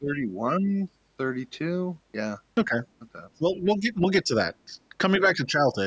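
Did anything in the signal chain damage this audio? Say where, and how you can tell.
Yes. In the call processing stage, the echo canceller likely could not separate the near talker from the loudspeaker echo of far-end talk and turned both down. The result is speech suppressed in double talk: the speech sinks by about 10 to 20 dB at 0.0–0.41, 0.6–0.84, 2.65–2.76, 3.38–4.34, 4.65–4.95 and 5.18–5.77 s.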